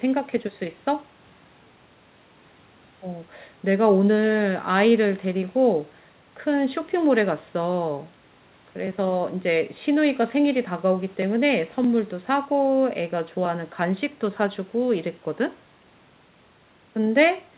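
Speech recording with no audible technical faults.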